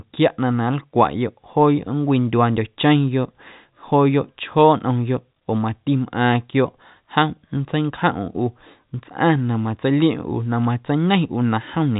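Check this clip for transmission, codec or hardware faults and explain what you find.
I find no transmission, codec or hardware faults in this clip.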